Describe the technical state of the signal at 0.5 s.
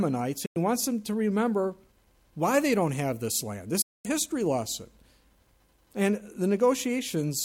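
At 0.5 s the sound drops out: a quick fade of about 8 ms takes it to silence at 0.46 s, and it stays muted until 0.57 s, where the programme resumes partway on. This is a digital broadcast dropout. The receiver lost the signal, or incoming frames failed their checksum, so it muted rather than play corrupt data. About 96 ms of programme is gone, which fits three lost frames.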